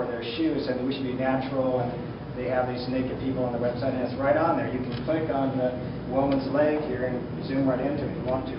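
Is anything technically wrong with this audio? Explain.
No, nothing is technically wrong with this audio.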